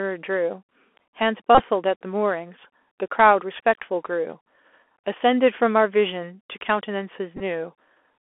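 The whole clip sounds narrow and scratchy, topped out near 3.4 kHz over a granular hiss: the Bluetooth CVSD headset codec, whose one-bit slope tracking fits a 64 kbps link. From 1.55 to 1.63 s a brief buzz near 267 Hz breaks in. This is a Bluetooth headset packet repeated: 37.5 ms of lost audio, spread over 45 ms, was filled by re-decoding stale packets, with the longest run about 30 ms. At 7.37 to 7.41 s the same fault returns as shorter ticks, 22.5 ms lost over 37.5 ms, with runs around 10 ms.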